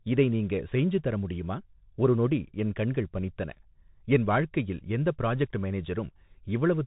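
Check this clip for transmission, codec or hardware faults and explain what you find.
One codec fault runs through the whole clip: Bluetooth CVSD headset codec damage. It is plainly audible from start to finish. CVSD sends one bit per sample, saying only up or down, with an adapting step size. That fits a 64 kbps narrowband headset link. Nothing above about 3.8 kHz survives, so the speech sounds boxed and dull. Loud, sharp sounds outrun the step and distort. S sounds turn scratchy. A granular hiss sits under the speech.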